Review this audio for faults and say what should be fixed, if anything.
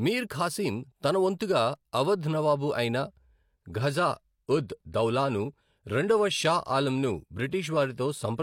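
From 3.66 s to the end at 8.42 s, the speech drops abruptly to an adaptive stream at a lower bitrate. Nothing remains above 16.2 kHz and artefacts rise, which points to a switch from 96 kbit/s AAC-LC to 32 kbit/s HE-AAC. Unlike a dropout, there is no gap, just a sudden quality step. A larger playback buffer or a floor on downswitching would keep the player on the higher rendition.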